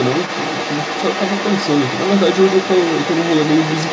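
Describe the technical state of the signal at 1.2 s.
At 1.2 s the other side's voice is leaking through, as it does across the whole recording from 0.0 to 3.93 s. A second voice sits roughly 10 dB under the main talker, likely because the echo canceller left part of the loudspeaker playback in the microphone signal. On a spectrogram, faint overlapping harmonic stripes run beneath the main speech up to the 8 kHz ceiling, and the waveform shows a raised, busy floor between syllables.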